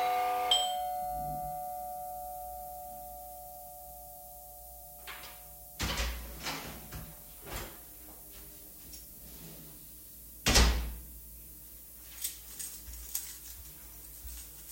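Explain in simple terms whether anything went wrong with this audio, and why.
A steady, thin hiss sits under the sound the whole way through, rising sharply toward the top end and only somewhat quieter than the sound itself. That's low bit depth with noise shaping, which fits an 8-bit signal whose rounding error was pushed up into the highs.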